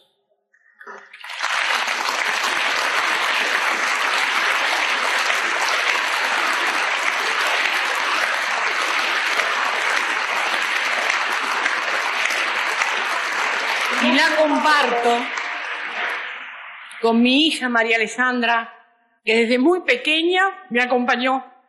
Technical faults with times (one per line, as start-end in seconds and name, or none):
20.70 damaged data in a compressed stream